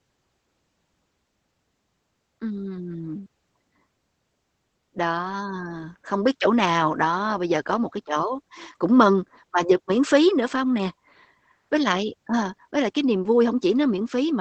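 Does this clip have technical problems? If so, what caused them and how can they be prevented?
Yes. Opus voice compression affects the whole clip. Nothing reaches above 8.6 kHz, so the speech sounds muffled. The excitation is coded coarsely, which adds a hoarse, slightly robotic edge. That fits the SILK coder at a low bitrate around 12 kbps. Encoding at a higher bitrate would prevent it.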